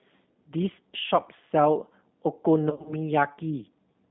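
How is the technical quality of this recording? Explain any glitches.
Quality is limited by low-bitrate telephony coding, with one concealed dropout. Throughout, the G.729 codec at 8 kbit/s rebuilds speech from a modelled vocal tract, leaving a roughly 150 Hz to 3.6 kHz band and plainly rough, synthetic texture. From 2.70 to 2.94 s, VoIP packet loss concealed by the speech codec removes about 120 ms in bursts up to 60 ms, which fits six lost 20 ms packets. The decoder extrapolates, producing fading buzzy or noisy sound and weak or distorted speech afterwards.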